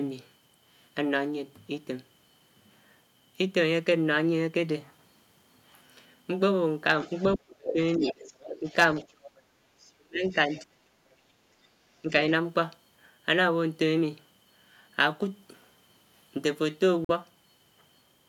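Other side's voice leaking through, 7.01 to 10.6 s: a second voice sits roughly 10 dB under the talker, likely because the echo canceller left loudspeaker sound in the microphone signal.

Speech suppressed in double talk, 7.1 to 8.05 s and 8.6 to 9.2 s: the talker's voice drops as much as roughly 35 dB in pieces, about half a second and then a fifth of a second. With both sides talking at once, the canceller likely turned down the talker along with the echo.

Background gated by the echo canceller, 9.62 to 9.67 s: the room sound dips about 7 dB for roughly 50 ms, then returns as the canceller releases the microphone.

Speech suppressed in double talk, 9.95 to 11.03 s and 12.02 to 12.13 s: the talker's voice dips again, by up to roughly 40 dB over about 0.7 s and then by roughly 10 dB for about 0.1 s.

Bluetooth dropout, 17.05 to 17.11 s: a silence of about 46 ms, which fits two lost frames, likely packets arriving too late at the headphones. 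The speech then resumes as though it had kept playing.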